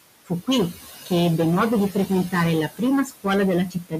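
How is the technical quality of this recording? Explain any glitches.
The recording has clear technical problems: overload distortion throughout, noise suppressor processing throughout, and three places where the suppressor swallows parts of the speech.

Hard clipping runs through the whole clip. The signal is driven about 17 dB past what a stage in the chain can pass, so nearly a third of the waveform has its peaks sliced flat. Those flat tops add high harmonics, heard as a harsh fuzz on every loud sound.

Noise suppressor artifacts are also present throughout. The processor cuts the room's background noise by about 17 dB, judging it frame by frame in each frequency band. As a result, the noise sinks in the gaps between words and comes back up underneath them.

Speech cut by the noise suppressor occurs at 0.25–0.48 s, 3.05–3.26 s and 3.7–3.94 s. Each time, the suppressor mistakes part of the speech for noise and pulls it down. 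The drops are about 20, 22 and 19 dB. Roughly 100, 100 and 150 ms of speech sound swallowed or faint.

The room noise itself, sitting about 12 dB below the speech, is part of the recording.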